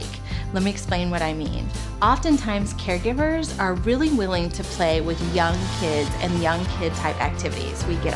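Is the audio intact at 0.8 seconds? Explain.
Yes, the audio is intact at 0.8 seconds, with no fault at that moment.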